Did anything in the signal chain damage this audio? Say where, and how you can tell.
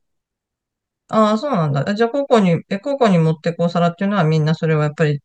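No, nothing in the chain has left a mark on this bit of speech that I can hear, so there's no stage to point at.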